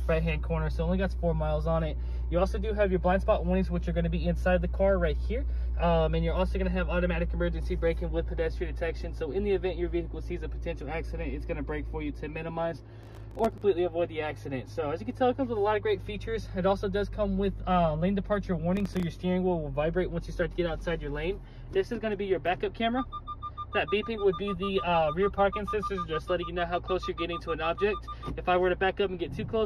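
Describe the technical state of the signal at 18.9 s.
At 18.9 s the signal is inside a burst of processor overload crackle running from 18.77 to 19.03 s. The processor repeatedly missed its deadlines for very short buffers, around a millisecond or two each, and roughly fifteen of them came out as brief silent gaps with hard edges. The result is a gritty crackle over the sound. A waveform shows tiny dropouts scattered through that quarter-second, and a spectrogram shows thin broadband vertical streaks at each edge.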